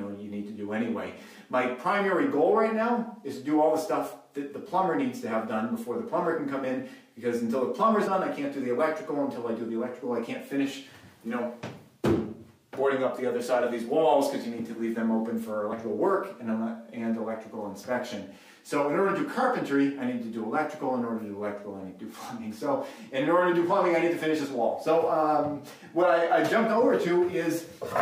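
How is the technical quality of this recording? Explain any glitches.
Two brief skips mar it, both compressed frames skipped, at 8.06 s and 15.72 s. The decoder never played a few whole frames, either missing or rejected as damaged, so the audio leaps ahead by roughly 70 ms, then 50 ms. That fits two or three frames of about 26.1 ms.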